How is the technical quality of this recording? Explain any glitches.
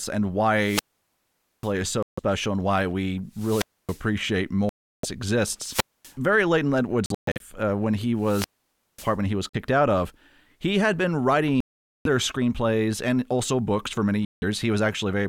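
The recording is speech, and its quality is poor. It has repeated holes of two distinct kinds that interrupt the speech roughly every second or two.

Wireless microphone squelch dropouts occur at 0.58–1.73 s, 3.31–4.08 s (just after "and why we"), 5.60–6.15 s and 8.18–9.16 s. When the analogue FM link weakens, hiss rises until the receiver's squelch gate closes. The output then mutes for about 0.84 s, 0.27 s, 0.24 s and 0.54 s respectively. Each event is heard as a swell of static, a near-silent gap, then speech returning.

The other gaps are most likely Bluetooth dropouts, where audio packets missed their delivery deadline and were discarded. They fall at 2.03–2.19 s (about 0.15 s lost), 4.69–5.05 s (0.34 s), 7.06–7.42 s, 9.49–9.55 s (43 ms), 11.60–12.07 s (0.45 s) and 14.25–14.44 s (0.17 s, just after "also books for many"). In the 7.06–7.42 s event, about 0.23 s is lost in scattered pieces, with the longest run 0.13 s, just before "uh when he". 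These holes are sharp-edged silences with no static. Speech resumes further along, as though it kept playing during the gap.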